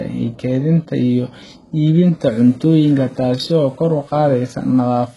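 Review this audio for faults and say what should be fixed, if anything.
Throughout the speech, the treble sounds bright but synthetic: s sounds turn lispy and metallic, and nothing reaches above 11.5 kHz. This is likely HE-AAC compression at a very low bitrate, around 12 kbps, with upper bands copied from lower ones. Unlike a plain low-pass, the top end isn't dull, just wrong. Encode at a higher bitrate, or with plain AAC, to prevent it.

From 2.23 s to the end, grainy distortion appears that rises and falls with the speech instead of sitting steady like hiss, roughly 35 dB below the speech. The likely cause is low bit depth without dither, consistent with rounding to 8 bits. Dithered reduction would give even hiss instead. Keep at least 16 bits and dither whenever reducing word length.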